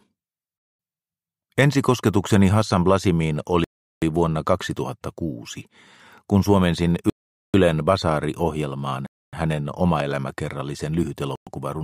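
The audio drops to silence four times: at 3.64 to 4.02 s (about 0.38 s), 7.10 to 7.54 s (0.44 s), 9.06 to 9.33 s (0.27 s) and 11.36 to 11.47 s (0.11 s), each time resuming abruptly. The pattern points to a Bluetooth stall, likely caused by interference delaying packets until the headphones' playback buffer emptied, with output pausing until retransmitted data arrived.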